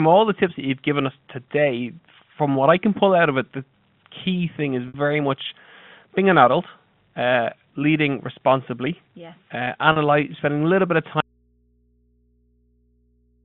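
At 4.88 s, and again at 9.92 s, there is packet loss with pitch repetition. About 60 ms goes missing at the first point and about 40 ms at the second, which fits three and then two 20 ms packets. The receiver fills each gap by repeating the last pitch period, so the sound briefly holds on a slightly buzzy, frozen tone before normal audio resumes. What separates this from a dropout is that the gap is filled with a held tone rather than left empty.

From 11.20 s to the end of the clip there is an audio dropout to a faint residue. The wanted signal cuts off abruptly and does not return. What remains is mains hum, roughly 45 dB below the earlier signal level. The likely cause is a break in the signal ahead of a path that stayed live, leaving the open input to pick up hum. The sudden step down to a steady hum, with no taper, separates it from a natural pause or a fade-out.

Throughout, the G.711 A-law telephone band limits the sound to roughly 150 Hz to 3.5 kHz.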